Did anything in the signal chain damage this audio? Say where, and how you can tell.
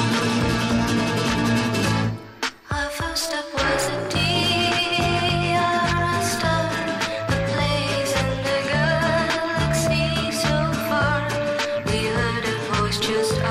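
No, nothing in the signal chain damaged this audio, so there is no stage to point to.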